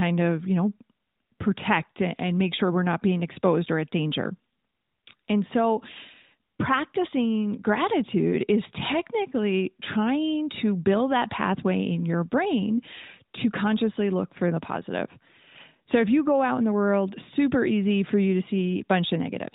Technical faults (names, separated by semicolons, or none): none